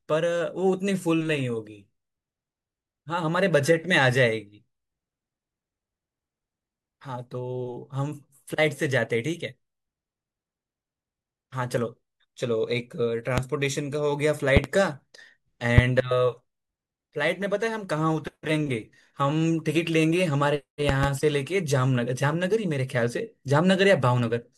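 Loud pops at 13.38–13.41 s, 14.57–14.67 s (double), 15.78–15.81 s and 20.89–21.06 s (double), likely voltage pulses, jump far above the speech, which continues uninterrupted beneath, unlike dropouts.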